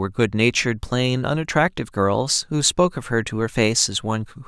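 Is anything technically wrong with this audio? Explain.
No, nothing technically wrong.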